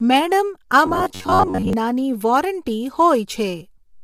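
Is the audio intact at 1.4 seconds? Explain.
No. From 0.86 to 1.73 s the voice becomes a rigid, metallic buzz near 94 Hz. This is robotic sound from repeated short buffers, likely caused by the software looping roughly 11 ms chunks while about half the real audio is skipped. Throughout the clip, the speech is also rough and grainy with a thinned top band, likely from low-delay AAC compression (AAC-ELD) at 32 kbps.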